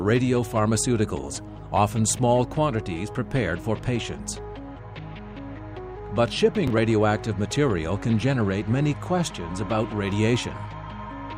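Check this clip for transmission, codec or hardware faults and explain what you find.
One fault turns up: processor overload crackle from 6.55 to 6.77 s. The processor repeatedly misses deadlines on short buffers, which fits buffers of around 10 ms, and several are skipped outright. Each skip leaves a hard-edged gap, together heard as gritty crackle. The waveform shows abrupt breaks, and the spectrogram shows thin vertical broadband streaks.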